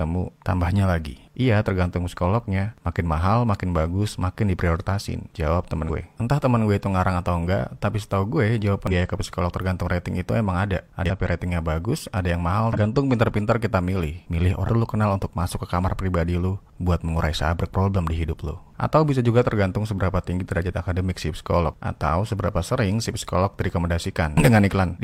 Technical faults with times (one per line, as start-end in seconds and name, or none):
5.85-5.90 damaged data in a compressed stream
8.87-8.93 damaged data in a compressed stream
11.06-11.10 damaged data in a compressed stream
12.73-12.78 damaged data in a compressed stream
14.63-14.69 damaged data in a compressed stream